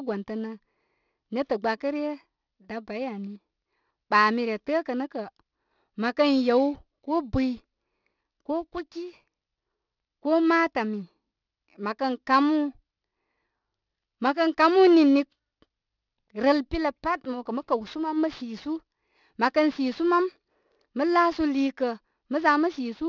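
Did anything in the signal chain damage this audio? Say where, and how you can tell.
Yes. Throughout the speech, sibilants sound gritty and metallic, and the spectrum runs hard up to 6 kHz. That points to aliasing at a sample-rate conversion, which fits an unfiltered drop to 12 kHz: content above 6 kHz folded back below it, roughly 25 dB under the speech.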